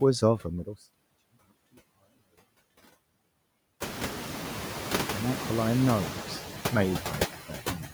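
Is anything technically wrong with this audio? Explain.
Yes. There are two faults, both from a noise suppressor.

Noise suppressor artifacts run through the whole clip. The suppressor estimates the steady background and pulls those frequency bands down, frame by frame. Here it removes about 17 dB of noise. The room noise rises by about 17 dB at roughly 4 s, to about 11 dB below the speech. After that the processing works harder. Residual noise pumps between phrases and swells under the speech.

Speech cut by the noise suppressor appears from 7.33 s to the end at 7.93 s. The suppressor mistakes quieter speech energy for noise and attenuates it with the background. The deepest drop is about 14 dB. Roughly 300 ms is affected in total. The closing sounds seem swallowed and faint, as if trailing off.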